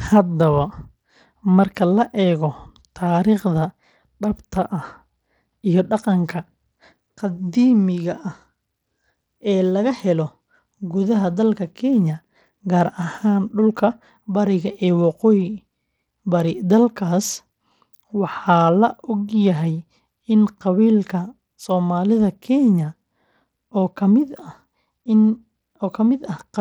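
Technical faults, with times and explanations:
Throughout, Bluetooth SBC compression: the speech carries a gritty, coarse edge and the treble thins out and flickers, likely from an SBC link running a small bit pool, which fits about 96 kbps. The starved upper sub-bands lose their bits while the coarse quantisation leaves grit and aliasing on everything.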